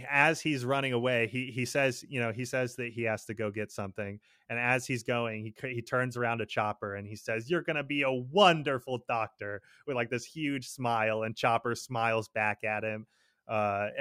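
No technical faults can be heard anywhere in the recording, and the signal stays continuous and steady throughout.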